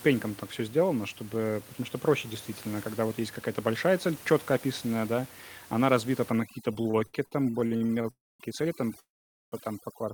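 From 6.3 s, right after "описанная да она разбита", to the end, the speech plays over a near-silent, twinkling background: overdone noise removal, suppressing bands it mistook for the room noise, which sits about 19 dB below speech. From 6.73 to 8.07 s the speech drags and stutters through 14 brief stalls, the longest 72 ms, covering about 0.41 s. This repeated stalling (stutter) comes from late packets draining the jitter buffer, with the last sound stretched each time. At 8.10 to 8.43 s and 8.99 to 9.55 s the audio stops, fading to near silence for about 0.24 s and 0.46 s, then resumes where it left off. These are call audio freezes, likely from packets held up in transit.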